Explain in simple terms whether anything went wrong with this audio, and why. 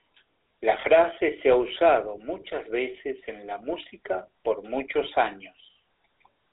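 GSM full-rate codec, throughout: this early mobile-phone codec rebuilds the speech from sparse, regular pulses and cuts everything above 4 kHz, so it sounds buzzy and muffled.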